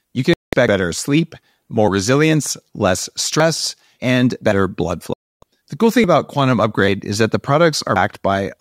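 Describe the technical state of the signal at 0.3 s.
A digital broadcast dropout begins just after, at 0.34 s, and lasts until 0.53 s. The receiver stopped getting valid frames and muted its output. The speech cuts to silence for about 190 ms, which fits six lost 32 ms frames, then returns.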